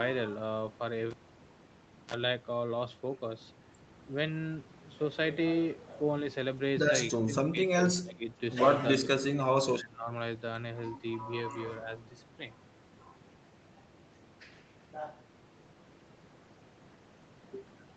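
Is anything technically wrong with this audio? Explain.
Yes. This speech recording has three kinds of fault.

From 1.11 to 2.14 s a cable is pulled and plugged in again while live. A pop marks the break, then about 0.98 s of near silence follows. As the plug goes back in, the tip touches first, and a 38 ms burst of 60 Hz mains buzz gets through before a second pop and the return of the sound. On a waveform the two pops are sharp spikes around a flat gap. A spectrogram shows the buzz as short stacked harmonics of 60 Hz.

Between 7.14 and 10.11 s the speech dips in four places: 7.14 to 7.35, 7.52 to 7.78, 8.03 to 8.3 and 8.95 to 10.11 s. The drops reach roughly 10 to 20 dB. This is likely speech suppressed in double talk. The echo canceller seems unable to tell the talker from the far side's loudspeaker echo, so it pulls the level down. On a waveform the envelope caves in. A spectrogram shows the energy thinning out.

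From 7.97 to 8.03 s there is a brief echo leak. A faint copy of the voice comes back about 239 ms late, at roughly 20 dB below the speech. The likely cause is a loudspeaker echo that the far end's canceller did not fully remove. A spectrogram shows a weak, delayed repeat of the same harmonic pattern, and it is too quiet to stand out on a waveform.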